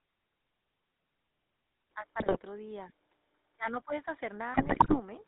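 A speech clip carried over the GSM full-rate codec from start to finish, with the plainly audible damage of that coder: a buzzy, gravelly roughness and nothing above 4 kHz, which fits the 13 kbps full-rate scheme. The codec models the vocal tract and drives it with a sparse, regularly spaced pulse excitation, so fine detail is lost and the grain stays constant across the whole recording. That constancy separates it from the intermittent faults that follow. At 1.91 s the tone turns duller and boxier with no gap at the join. The level falls by about 5 dB and a new noise floor appears about 35 dB below the speech. This most likely comes from the input being switched to a poorer device, with its own narrower band, colouration and background noise. A simple gain change would leave the tone and noise unchanged, and a codec change would alter the coding grain rather than the microphone character. 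Two bursts of GSM bit errors follow, at 2.20 to 2.38 s and at 4.54 to 5.00 s, with the second longer and denser. Corrupted filter, pitch and gain values reach the decoder, so individual frames are resynthesised with a bent spectrum or a jump in level. The result is squawks, pops and gargling. The sound keeps going through these bursts and turns into garbage, whereas packet loss would leave dropouts or smeared repeats.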